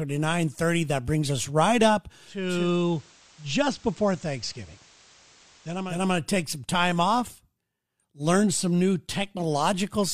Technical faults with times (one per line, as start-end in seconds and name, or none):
2.23-6.09 digital radio blending to analogue